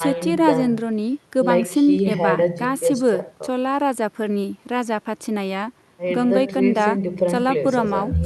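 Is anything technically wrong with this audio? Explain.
No, nothing technically wrong stood out on listening to this speech clip.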